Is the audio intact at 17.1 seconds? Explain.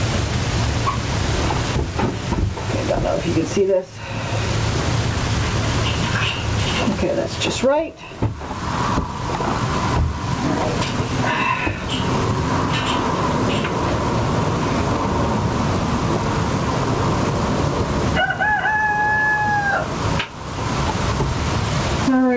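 No. At 17.1 s, as throughout the clip, the audio shows gain pumping: the level is pulled down on each loud sound and recovers in between, with a swing of around 20 dB, so loud and soft parts sit close together and the sound is squashed. The likely cause is input gain set far too high, with a fast limiter or compressor clamping it. The band-limiting to 8 kHz fits a G.722 call codec.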